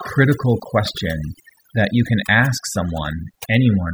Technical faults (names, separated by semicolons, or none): overdone noise removal